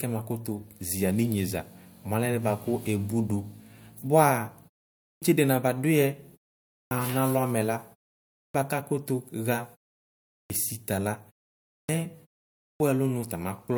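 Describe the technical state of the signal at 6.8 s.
At 6.8 s the signal is inside a clipped start after a pause, spanning 6.64 to 6.91 s. A gap of 0.35 s lets the output device drop into a low-power state, and on the next onset it needs time to wake and relock before passing audio. The first 0.27 s of the returning speech is swallowed, so the phrase begins abruptly out of silence with its initial sounds missing.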